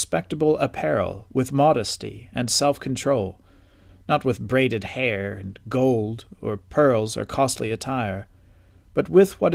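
No technical faults can be heard in this speech. The Opus voice compression runs at 24 kbps in hybrid mode, keeping the full band with only light coding damage.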